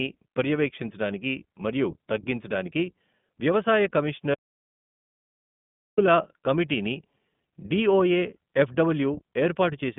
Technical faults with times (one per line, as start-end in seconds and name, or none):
0.00-9.99 iLBC codec
4.34-5.98 audio dropout to silence